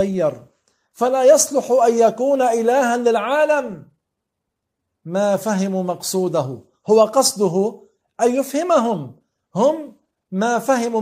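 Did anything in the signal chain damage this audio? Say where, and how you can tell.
No, nothing stood out on listening that would point to damage anywhere in the signal chain.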